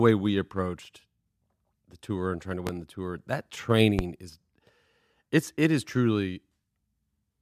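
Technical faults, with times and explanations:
2.67–2.70 s and 3.99–4.02 s, loud pop: two single sharp pops, each about 35 ms long and peaking roughly 15 dB above the speech, which continues underneath. They are likely sudden voltage pulses from a plug, switch, static or driver glitch, shaped by the following circuitry into a brief thump.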